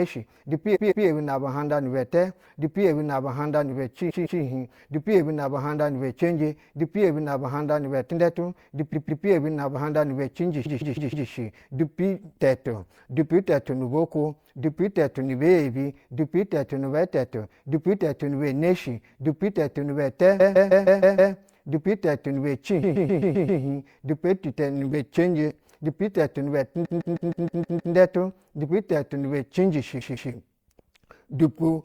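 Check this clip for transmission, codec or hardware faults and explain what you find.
The clip has repeated frames at eight points: 0.75–1.06, 4.09–4.40, 8.92–9.24, 10.65–11.27, 20.39–21.33, 22.82–23.60, 26.84–27.94 and 30.00–30.32 s. A block of compressed frames was delivered more than once, so the decoder replayed the same audio. Each block is 157 ms (131 ms at 22.82 s) and plays two to seven extra times. The result is a rhythmic speech stutter, and each event lengthens the audio by about 0.3 to 1.1 s.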